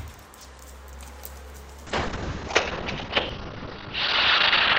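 At 1.87 s a call bitrate drop cuts the encoder from 96 to 6 kbps, narrowing bandwidth from 20 kHz to 6 kHz, so the sound turns coarse, watery and muffled through the end.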